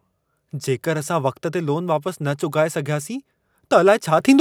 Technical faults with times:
4.20 microphone volume stepped up

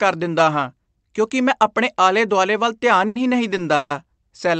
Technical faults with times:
3.07-3.18 short stall from a late packet
3.76-3.93 call audio freeze

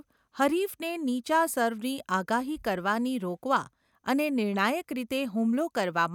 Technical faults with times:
none

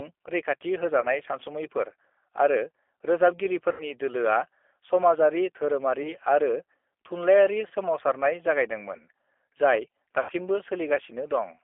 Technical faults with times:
0.00-11.64 G.729 codec
1.01-1.07 VoIP packet loss concealed by the speech codec
3.72-3.91 VoIP packet loss concealed by the speech codec
6.03-6.12 VoIP packet loss concealed by the speech codec
7.68-7.73 VoIP packet loss concealed by the speech codec
10.20-10.33 VoIP packet loss concealed by the speech codec

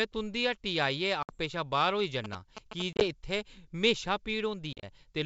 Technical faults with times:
1.23-1.38 packet loss on an ADPCM call
2.24-2.82 GSM signalling bursts
2.93-3.05 packet loss on an ADPCM call
4.73-4.84 packet loss on an ADPCM call

